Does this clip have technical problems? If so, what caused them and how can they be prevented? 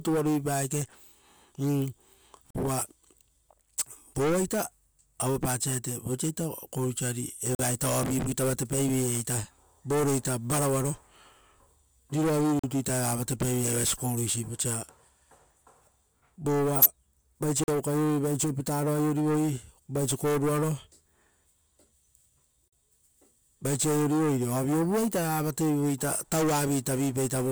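Yes, two kinds of problem. There's a gap between chunks at 2.50, 7.55, 12.59, 17.64 and 22.68 s. Each is a 44 ms hole, repeating every 5 s, where the next chunk of speech starts late or carries padding silence. No sound is lost, but it's interrupted at each join. To prevent it, have the player queue chunks gaplessly and trim codec padding at the joins.

The other is a corrupt frame decoded, twice. At 14.45 s there's a faint blip of about 0.05 s, and from 16.75 to 16.86 s there's a much louder burst. Flipped bits in the compressed data led the decoder to put energy at the wrong frequencies, and the lengths point to a couple of damaged frames, then a few more. To prevent it, checksum frames and conceal bad ones instead of playing them.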